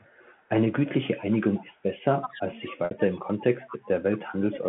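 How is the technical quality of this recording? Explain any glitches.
The recording has three recurring faults: echo leaking back, the talker being suppressed during double talk, and one packet-loss gap.

Echo leak, at 0.00–0.04, 1.31–1.38, 1.54–1.75, 3.69–3.77 and 4.13–4.18 s: the far-end echo canceller likely left residue, so a faint copy returns 224 ms late, about 40 to 20 dB below the speech.

Speech suppressed in double talk, at 2.02–3.88 s and from 4.24 s to the end: with both sides talking, the canceller likely attenuated this talker too, dropping the voice by up to about 20 and 25 dB.

Packet loss with pitch repetition, at 2.85–2.91 s: 60 ms went missing, which fits two lost packets. The receiver repeated the last pitch period and faded it out over about 50 ms, so the sound fades into silence before the speech returns with a short cross-fade.

Throughout, the G.711 telephone coding limits the audio to below 4 kHz.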